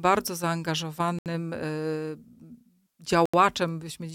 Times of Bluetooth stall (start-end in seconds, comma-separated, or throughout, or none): 1.19-1.26, 3.26-3.34